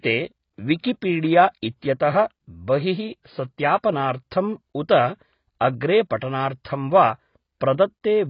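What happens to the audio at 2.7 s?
At 2.7 s you're hearing the same thing that runs through the whole clip: heavy AAC compression, likely from a low-bitrate AAC-LC encode. Nothing survives above about 5.2 kHz, so the speech sounds dull and boxed-in, and there's a warbly, fizzy smear on sustained sounds and sibilants. That's the encoder starving the upper bands and coarsely quantising what's left, and the damage level points to something as thin as 16 kbps.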